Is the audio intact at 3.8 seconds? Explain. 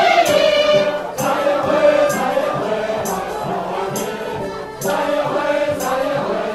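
Yes, the sound at 3.8 seconds is intact, with no dropout, click, distortion or other fault at that moment.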